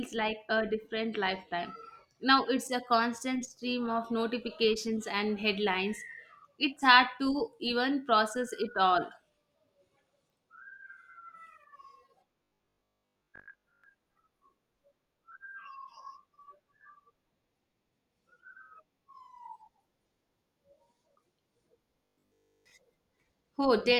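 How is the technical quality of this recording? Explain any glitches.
The speech has two glitches, both robotic sound from repeated short buffers, at 12.44–13.84 s and 22.06–22.72 s. Each time, the voice becomes a rigid metallic buzz at 50 Hz. The likely cause is audio arriving late, with a 20 ms stretch replayed in its place. That replaces most of the first span and all of the second. On a spectrogram the spans show evenly spaced harmonic bands 50 Hz apart, and the waveform repeats identical 20 ms cycles.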